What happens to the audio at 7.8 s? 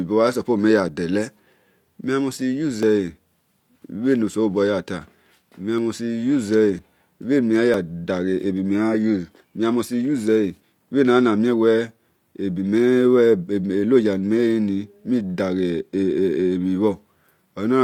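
Right around 7.74 s there's a tiny skip caused by an overlap between stream segments. The speech is cut at the boundary between two segments, which here look to be 1 second long. Their time stamps overlapped, so the player trimmed the overlapping bit as if it were duplicated, but that audio was never actually doubled. Roughly 15 ms of real speech vanishes, and the waveform jumps straight across the gap. You hear it as a quick skip.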